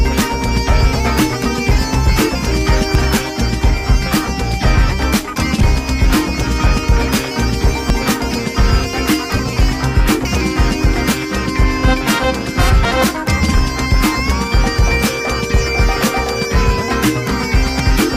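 At 2.95 s, 7.90 s and 12.85 s the audio jumps forward, losing roughly 50 ms each time, with the two sides butted together and no gap of silence. The skips recur every 4.95 s, which fits audio missing between chunks: the recorder likely works in 5-second blocks and drops a short slice at each handover, so every block starts slightly later than the previous one ended.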